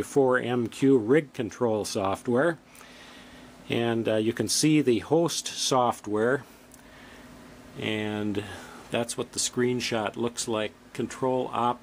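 No technical faults can be heard in this audio.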